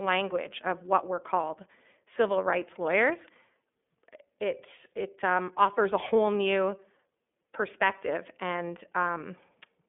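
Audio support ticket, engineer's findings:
iLBC codec on the voice path, whole clip. Narrowband link, each 30 ms frame coded independently, which fits the 13.33 kbps mode. Result: plainly audible codec damage, speech rough and slightly synthetic. Line band roughly 200 Hz to 3.5 kHz, nothing above 3.7 kHz, so sibilants dull and top end missing.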